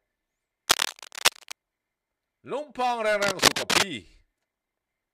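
A worn cable, connector or control was likely being handled, its contact resistance jumping about rapidly, and the result is cable scratch noise in two stretches. From 0.68 to 1.54 s, dense, uneven crackling and rustling sits over the sound at about the same level as the sound itself. From 3.22 to 3.87 s it returns somewhat louder, rising a little above the sound, so the scratching briefly dominates.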